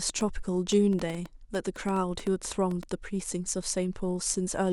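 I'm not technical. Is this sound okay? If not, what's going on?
No. From 0.09 to 2.84 s, a train of clicks ticks over the speech, roughly fifteen of them at about 5.5 per second, spaced unevenly, and they carry on through the pauses too. Each click sounds much like the others, which sets this apart from random crackle, where every pop differs. It is also a steady run rather than a single stray click. The likely cause is interference from nearby equipment or a faulty connection or power supply.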